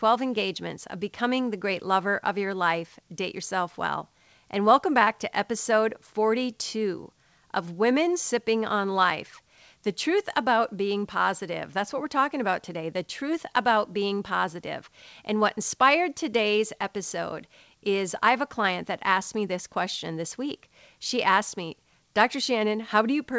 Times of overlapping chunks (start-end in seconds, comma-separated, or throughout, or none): none